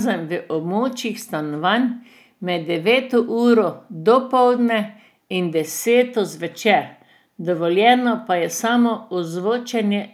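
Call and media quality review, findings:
Nothing stood out on listening through the speech in this recording, so there are no findings to log for the ticket.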